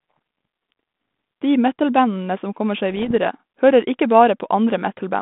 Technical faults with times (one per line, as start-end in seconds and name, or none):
2.90-3.15 bit errors on an ADPCM link